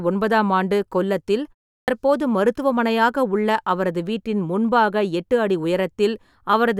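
Speech with a clipped start after a pause at 1.81 s: after roughly a 0.35 s gap following "ஒன்பதாம் ஆண்டு கொல்லத்தில்", about 68 ms is swallowed, so "மருத்துவமனையாக உள்ள அவரது வீட்டின்" bursts in abruptly. The output path was waking from sleep in the silence and missed the onset.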